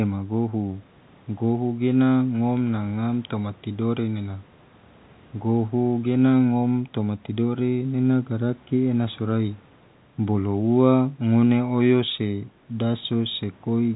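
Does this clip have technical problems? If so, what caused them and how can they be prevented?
No, no technical faults here.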